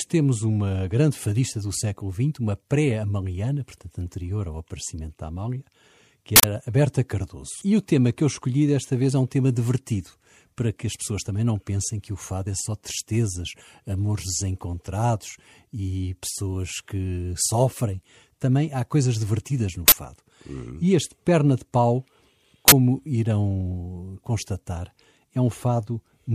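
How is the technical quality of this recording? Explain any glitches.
The recording has three glitches. At 6.36 s a loud burst of digital noise cuts into the speech for 80 ms. Two shorter 40 ms bursts follow, at 19.88 s right after "há coisas divertidas no" and at 22.68 s just before "irão constatar". All three are uninitialised buffer faults: each block went to playback before any audio was written into it, so leftover memory contents were played as samples and came out as harsh noise.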